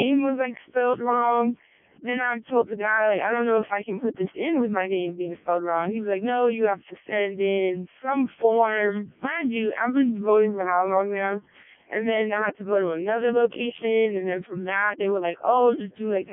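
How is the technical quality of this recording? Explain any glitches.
Poor: the speech sounds robotic and buzzy for the whole clip, with a metallic, synthetic edge and nothing above 3.5 kHz. That points to the Codec 2 vocoder, which sends only pitch and spectral shape and rebuilds speech from sine waves, heavily damaged here, which fits its lowest 0.7 kbit/s mode.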